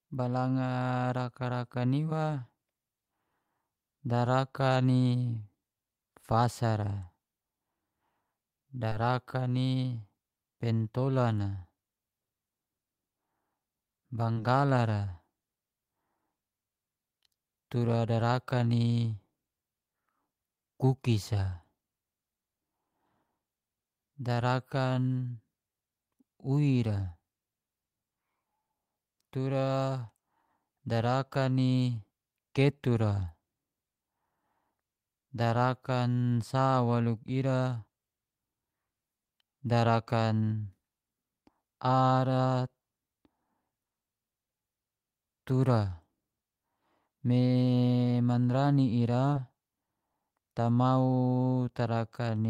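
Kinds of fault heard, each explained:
Short concealed packet loss: about 20 ms of speech arrived too late three times, and the receiver patched each gap by extending the preceding sound, leaving brief smears.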